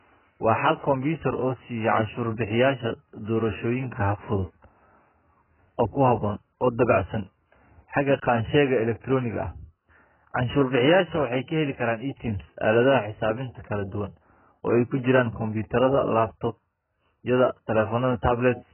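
Low-bitrate audio saved at a high bitrate runs throughout the speech, with nothing above 3.1 kHz and the smeared, watery texture of a heavily starved codec audible everywhere. The likely cause is a very low-bitrate encoding, something around 8 kbit/s AAC, later re-saved as a high-bitrate MP3. The second encoding kept the damage but could not restore the discarded detail, so sibilants stay dull and the top end stays empty.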